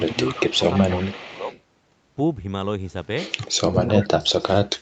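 From the start to 1.61 s there is an echo leak: the far end's echo canceller likely failed to fully remove the loudspeaker signal its microphone picked up, so some of it was sent back. The result is a faint second copy of the speech trailing it by 337 ms and sitting about 20 dB below it, audible as a ghostly repeat under the talker.

Speech suppressed in double talk overlaps that stretch and comes back later. When both ends were active, the canceller likely could not tell the talker from the echo and pulled the level down on both. There are shallow dips of roughly 5 dB at 0.08 to 0.16 s and 0.42 to 0.63 s, and a deeper one of roughly 10 dB from 0.98 to 1.51 s. The heaviest is from 3.67 to 4.48 s, where the speech sinks by roughly 30 dB and nearly drops out.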